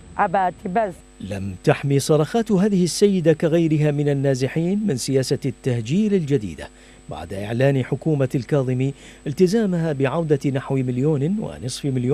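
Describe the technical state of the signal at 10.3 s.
At 10.3 s the signal is intact, with no audible fault at that moment.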